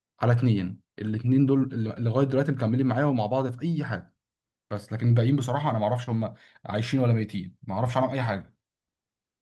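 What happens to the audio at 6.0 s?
From 6.03 to 6.09 s there is a short concealed packet loss: about 40 ms of the call arrived too late, so the receiver stretched the preceding sound and blended back. It sounds like a brief smear.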